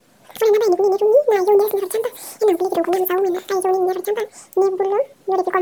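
Audio read two samples at a time (double speed) runs through the whole clip. The reader treated each pair of samples as one frame, so the speech plays twice as fast and a full octave, 12 semitones, higher.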